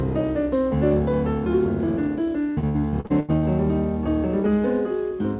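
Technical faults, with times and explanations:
2.5–3.44 s, repeated packet loss (robotic sound): nearly half is lost and patched by repeating prior sound, gaps up to 82 ms; spectrogram shows smeared, repeated blocks.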